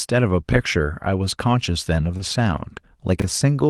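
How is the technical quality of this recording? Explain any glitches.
The recording has three short glitches, all after the two-second mark, heard through an Opus call path at 32 kbps that stops around 12 kHz.

From 2.17 to 2.21 s there is a brief smear, a wobble where the sound seems to hang for an instant. This is short concealed packet loss. About 20 ms of audio arrived too late, so the receiver extended the preceding sound to fill the gap and then blended back into the real signal.

Overlapping that, from 2.19 to 2.21 s, the audio turns rougher and noisier for one frame. This is a lost packet rebuilt from error correction. The following packet carried a low-bitrate copy of the missing 20 ms, and the decoder played that coarser copy instead of leaving a gap.

From 3.20 to 3.24 s there is a jumbled, garbled moment. These are chunks out of order. A 20 ms chunk played one chunk late, after audio that should have followed it. 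Nothing is lost, but the reshuffled sequence creates three abrupt joins.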